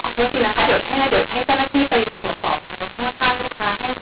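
From start to finish, the speech has a mu-law and A-law mix-up: G.711 A-law coding is decoded as mu-law, scrambling levels so speech turns harsh and gritty while pauses fill with hiss. The waveform shows lifted, noisy silences and uneven peaks; the spectrogram, capped at 4 kHz, shows broadband smear.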